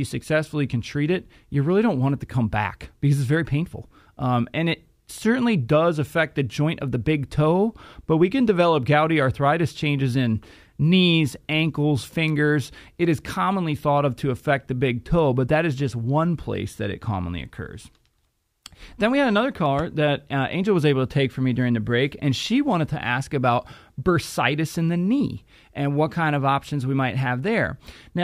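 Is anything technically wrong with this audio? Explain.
No, nothing technically wrong turns up in this recording; no faults are audible anywhere in it.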